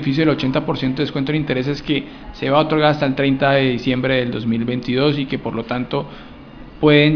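No dropouts, glitches, distortion or timing errors turn up anywhere in the audio.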